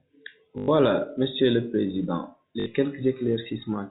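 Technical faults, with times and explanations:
0.58 to 0.68 s and 2.60 to 2.66 s, packet loss with last packet repeated: a brief robotic stutter with a buzz near 50 Hz. The receiver replayed the last packet to fill 100 ms and then 60 ms gaps, which fits 20 ms packets.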